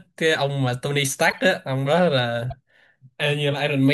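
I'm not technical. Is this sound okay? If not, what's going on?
No. At 1.31 s and 2.47 s, a corrupt frame decoded: damaged chunks of compressed data played anyway, each causing a brief squeak or noise burst.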